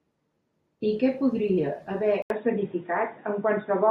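Speech that, after "I que podria haver" at 2.22 s, drops out for 80 ms and returns dull and boxy to the end, with nothing above 3.8 kHz, a faint new noise floor and about the same level: likely an input switched to a poorer device.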